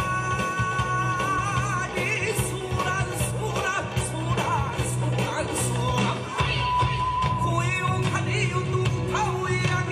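Right around 1.35 to 1.39 s you get a case of compressed frames skipped. The decoder never played a short run of the encoded stream, either because that data was missing or because it was rejected as corrupt, so the audio leaps ahead by about 50 ms, which fits a whole number of codec frames.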